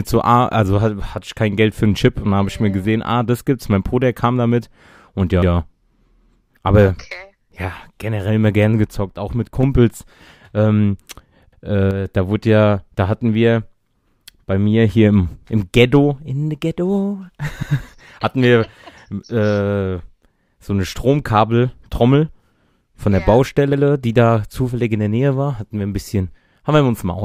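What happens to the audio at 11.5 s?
At 11.53 s the audio shows overlapping chunks. The speech was handled in blocks of about 6 s, and the block beginning here started 100 ms before the previous one had finished instead of picking up where it ended. The stream therefore plays the same 100 ms of speech twice, from 11.53 to 11.63 s. It comes across as a brief stutter at the join where the repeated section butts against the earlier audio.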